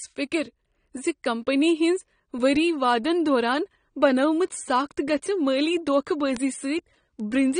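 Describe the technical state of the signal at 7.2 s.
At 7.20 s a bit error spike sounds as a single sharp tick, a click with no pitch and no relation to the speech around it. One sample jumps by a power of two, as if a single bit in memory or on a digital link flipped, and then the waveform returns to normal on the next sample. On a waveform it is one isolated vertical line far outside the surrounding envelope. A spectrogram shows a thin full-height streak spanning every frequency at that instant.

Underneath, and across the whole clip, the speech is dull and smeared, with a warbling, fizzy texture on sustained vowels and sibilants. This is likely AAC compression. Plainly audible AAC-LC damage of this kind suggests a low bitrate, around 32 kbps, where the encoder quantises its frequency lines coarsely and drops content it judges less audible. On a spectrogram nothing appears above 9.7 kHz, so the image has a hard flat ceiling, and below it there are patchy holes and blotchy noise-filled bands instead of clean harmonic lines.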